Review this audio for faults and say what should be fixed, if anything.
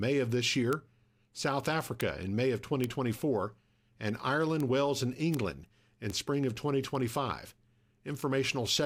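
Seven bit error spikes, sharp broadband ticks at 0.73 s (right after "of this"), 2.01, 2.84, 4.60, 5.34, 6.10 (just before "spring of") and 8.21 s. Each is a flipped bit that throws a sample or two up by a power of two, peaking around −10 to −22 dBFS. Fix it with error-checked transfers and storage, such as ECC memory or a link with CRC and retransmit.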